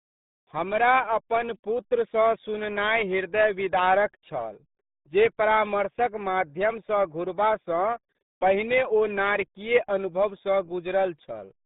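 From start to finish the speech carries RealAudio 14.4 codec damage, the signature of the old RealAudio 1 dial-up format. The band is squeezed to roughly 150 Hz to 3.7 kHz, and nothing at all survives above 3.8 kHz, so sibilants and consonant detail vanish. The heavy coding leaves the voice muffled and gargly, with a watery, burbling texture, which fits the coarse quantisation of an 8 kbit/s stream.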